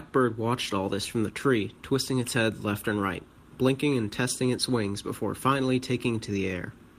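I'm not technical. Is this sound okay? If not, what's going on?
Yes, no faults are audible.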